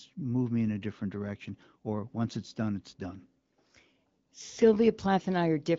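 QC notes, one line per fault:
No faults heard in this speech clip.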